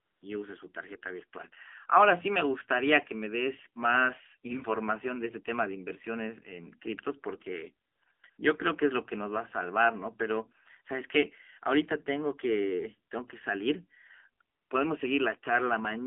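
The whole recording carries the AMR narrowband mobile codec. The band runs from roughly 300 Hz to 3.5 kHz, with nothing above 4 kHz. The vocal-tract model is driven by only a few pulses per subframe, which gives the speech a buzzy, synthetic edge. The damage is plainly audible, which fits a low mode around 7.4 kbps.

AMR comfort noise appears where the sender stopped transmitting speech frames and the receiver substituted smooth synthetic noise built from a coarse level and spectrum estimate. It is heard from 0.00 to 0.22 s, then in a tight cluster at 7.88–8.02 s, 8.04–8.06 s, 8.12–8.24 s and 8.30–8.38 s, and finally at 14.56–14.70 s. Each time the real background drops out and a steady hiss switches in. Around 8 s it switches in and out rapidly, producing a choppy gating effect.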